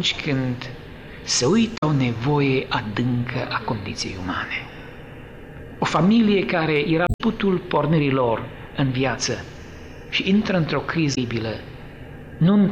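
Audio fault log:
1.74–1.83 s, 7.04–7.21 s and 11.11–11.18 s: damaged data in a compressed stream. Corrupted bytes leave the decoder misreading frames and losing sync until it finds the next valid frame header, so each spot comes out as a brief chirp or blip lasting roughly 70 to 170 ms.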